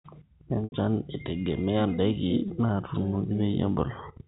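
Packet loss with pitch repetition occurs twice. From 0.64 to 0.72 s an 80 ms gap, consistent with four 20 ms packets, is bridged by repeating the last pitch period, which fades out over about 50 ms before the speech returns with a short cross-fade. At 2.48 to 2.50 s a 20 ms loss, about one packet's worth, gives a brief held, buzzy tone. Both sit within the 4 kHz-limited G.711 telephone band.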